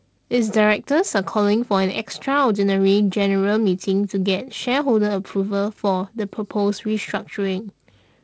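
No faults can be heard in this speech, which comes through G.722 wideband telephone coding at 48 kbit/s with a bandwidth reaching about 7 kHz, a faint hiss in the upper band and a slightly grainier lower band from the reduced bit allocation.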